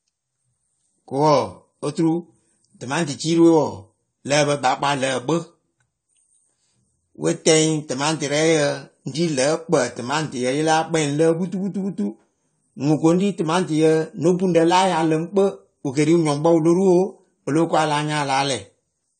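The speech has most likely been through low-bitrate AAC-LC encoding throughout, with plainly audible damage that fits a rate near 32 kbps. To save bits, the AAC compression discards everything above about 9 kHz and coarsely quantises what remains. The top end is missing, so the sound is dull and muffled, and smeared, watery artefacts are plainly audible across the whole recording, warbling on sustained sounds and fizzing on sibilants.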